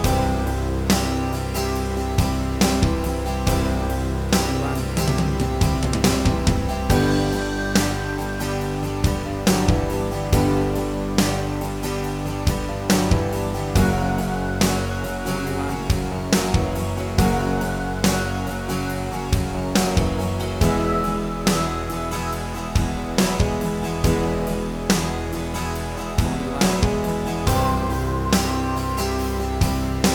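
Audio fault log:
No faults detected; nothing audible calls for attention at any point in the audio.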